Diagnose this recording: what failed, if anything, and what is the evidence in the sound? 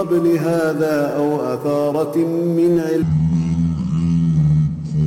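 A section at the wrong speed runs from 3.02 s to the end at 5.06 s. The sound abruptly slows to 0.524x and drops roughly ten semitones, with speed and pitch shifting together. This likely comes from the editing or playback stage running that section against a mismatched clock.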